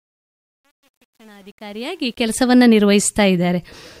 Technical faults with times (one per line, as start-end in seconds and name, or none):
0.00-2.40 truncation distortion on a fade